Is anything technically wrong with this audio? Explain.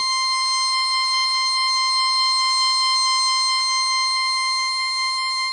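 Yes. Throughout the music, the likely cause is WMA compression at a low bitrate, with the codec damage plainly audible and consistent with roughly 32 kbps. A transform codec working this hard spreads its quantisation noise over long blocks of tens of milliseconds and zeroes weaker spectral lines, and nothing remains above 10.1 kHz. The result is dull and band-limited, with ringing, smeared transients and a washy hiss that rises and falls with the music.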